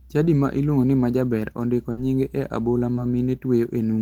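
Around 1.91 to 1.99 s, right after "iluongo ni majaber ondiko", there's a burst of packet loss: about 60 ms gets patched over with a fading continuation, then the speech jumps ahead to "nyinge e abola". Then at 2.95 to 2.99 s, just after "ondiko nyinge e abola", a short concealed packet loss leaves a brief 20 ms smear where the receiver filled the gap.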